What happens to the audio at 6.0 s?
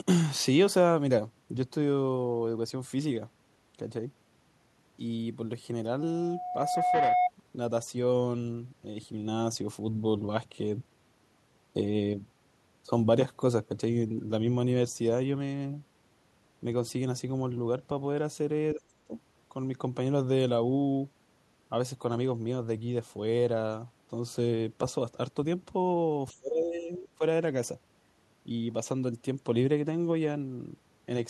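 At 5.99 s a loudspeaker feedback squeal begins: the microphone is re-amplifying its own loudspeaker output, and at 724 Hz the loop gain exceeds unity. That tone swells over roughly a second to sit about 5 dB above the speech, then stops at 7.31 s.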